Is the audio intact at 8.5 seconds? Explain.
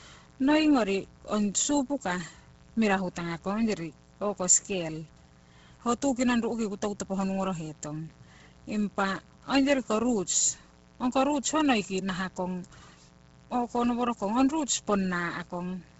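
No. At 8.5 seconds you're hearing two problems that run through the whole clip. The first is mains buzz: a steady, raspy drone from a 60 Hz supply, sitting roughly 30 dB under the speech. It's raspy rather than a smooth hum because something in the chain, maybe a dimmer, a rectifier or a poorly shielded cable, is letting in sharp spikes twice per cycle, and those throw harmonics of 60 Hz well up into the kilohertz range.

The second is heavy codec damage, most likely from Bluetooth LC3 compression. The speech has a breathy, grainy edge, and there's nothing at all above 7.7 kHz. At a rate that fits around 16 kbps with 10 ms frames, the encoder discards much of the upper spectrum and fills the gaps with shaped noise, which is where that breathy, grainy texture comes from.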